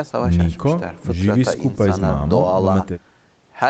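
No technical faults are heard in this speech, which comes through an ordinary call path with its top end stopping at about 8 kHz.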